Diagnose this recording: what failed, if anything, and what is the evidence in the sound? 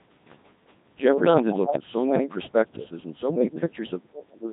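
Codec stage: Codec 2 vocoder at a rate consistent with 2.4 kbit/s throughout, robotic and buzzy speech rebuilt from sine waves; spectrogram shows smeared, comb-like harmonics without fine waveform detail.

Call processing: speech suppressed in double talk, likely echo canceller, from 1.42 to 2.85 s and 3.28 to 4.46 s; waveform shows broken dips roughly 30 to 35 dB deep.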